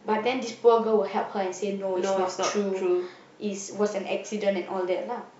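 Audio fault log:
No audible faults detected.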